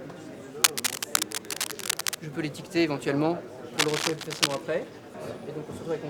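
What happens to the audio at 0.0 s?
Nothing goes wrong at 0.0 s; the audio is intact at that moment.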